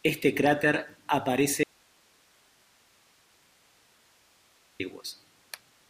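The signal feeding the path was likely lost for about 3.2 seconds while everything after the break stayed live, an audio dropout to a faint residue. At 1.63 s the speech cuts off abruptly in mid-flow, leaving only steady hiss roughly 35 dB below the normal level, and at 4.80 s the speech snaps straight back in. The edges are sudden, with no fade, so it sounds like a hole in the signal rather than a pause.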